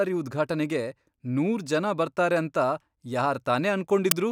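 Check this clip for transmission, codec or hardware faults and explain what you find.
One fault turns up near the end of the speech. File tags played as audio at 4.11 s: the compressed data of an embedded cover picture is decoded as samples, giving a brief hard-edged burst of very loud white noise.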